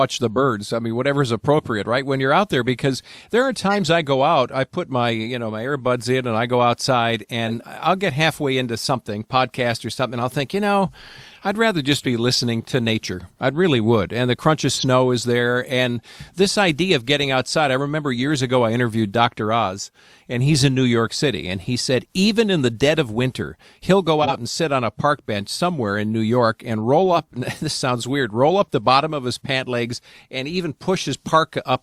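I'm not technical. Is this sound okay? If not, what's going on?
No. There are two kinds of problem in this speech recording.

At 7.46 to 7.64 seconds, right after "and I go outside" and before "I'll get halfway into", some compressed frames were skipped. The file stores sound in small chunks, and a few never got played. About a twentieth of a second of sound simply vanishes. You hear a short jump forward at the join.

Twice, a corrupt frame was decoded. A chunk of the file was damaged, but the player used it anyway, so it made sound in the wrong places. The first is at 11.94 to 12.03 seconds, between "you know I'd rather" and "be listening to nature". It is a brief chirp or burst of noise. The second is at 24.22 to 24.36 seconds, between "of winter he'll go" and "and sit on a". It is much louder than the first.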